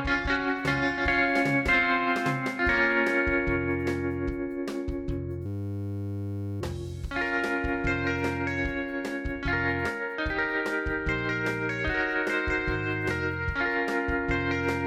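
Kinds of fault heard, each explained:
System hang loop: the system froze while the hardware kept replaying one 10 ms buffer, so a steady 100 Hz buzz replaces the sound from 5.46 to 6.61 s.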